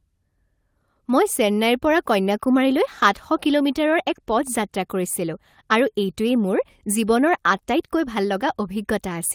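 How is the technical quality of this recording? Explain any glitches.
No technical faults can be heard anywhere in this speech recording. There are no glitches to explain.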